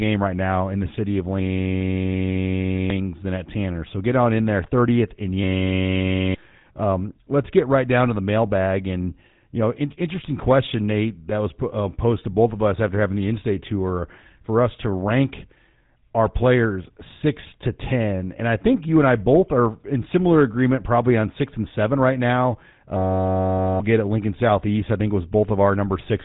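From start to finish the speech carries GSM full-rate codec damage, plainly audible, which fits a 13 kbps GSM full-rate encoding. The codec rebuilds each voice from a vocal-tract model excited by coarse, evenly spaced pulses, so voiced sounds turn buzzy and gravelly. On a spectrogram everything stops sharply at 3.8 kHz, with smeared, grainy harmonics below it and a pulse-train texture visible in the waveform's voiced stretches.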